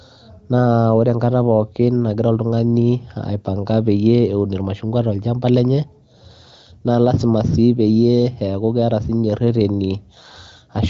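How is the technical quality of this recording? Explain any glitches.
No glitches; the speech is band-limited to about 7 kHz and sounds consistent with an AMR wideband (HD Voice) codec at a higher mode such as 18.25 kbit/s, with any coding damage faint at most.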